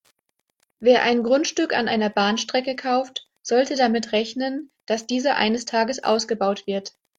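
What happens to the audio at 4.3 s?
Wi-Fi interference is present at 4.3 s, and it runs through the whole clip. A nearby Wi-Fi radio's transmissions are being picked up and rectified by the audio circuit. The radio's beacon repeats every 102.4 ms, so the result is a steady ticking at nearly ten clicks per second beneath the speech. It sits very low, roughly 50 dB below the signal, so it is faint.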